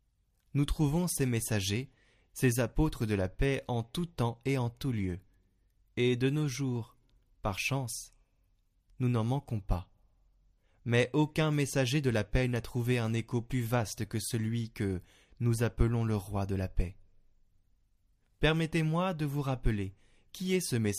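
Speech recording with no audible technical faults anywhere in the clip.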